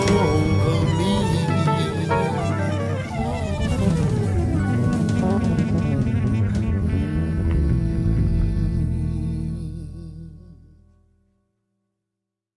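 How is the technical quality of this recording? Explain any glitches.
No technical faults can be heard anywhere in the recording, and the signal stays continuous and stable throughout.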